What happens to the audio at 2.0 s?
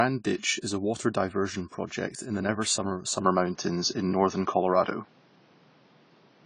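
At 2.0 s the speech carries the same plainly audible codec damage present throughout the clip, most likely AAC compression. Nothing is left above 10 kHz, so the sound is dull and smeared. The coder divides each frame into 1,024 frequency lines and quantises them against a hearing model, spending few bits where it judges masking will hide the error. Here that is consistent with a low-bitrate AAC-LC encode, around 24 kbps.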